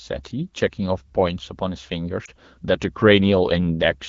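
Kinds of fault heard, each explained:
Lost AMR speech frames: A radio error corrupted a frame so it failed its checksum, and the AMR-WB decoder, running at 12.65 kbit/s, filled the gap by repeating the last good pitch and vocal tract settings at reduced gain. Between 2.25 and 2.30 s this comes through as a brief dip or warble, about 20 ms long, which fits a single lost frame, before the speech picks up again.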